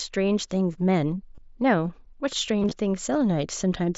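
At 1.35 to 1.38 s the speech shows concealed Bluetooth headset packet loss: about 30 ms of packets between headset and phone never arrived, and the receiver refilled the gap by repeating the closest-matching recent waveform, giving a short buzzy hold. From 2.60 to 2.71 s the same fault recurs, with 75 ms lost across a 120 ms span in runs up to 22.5 ms, so the patches warble as real audio resumes over the mSBC wideband link.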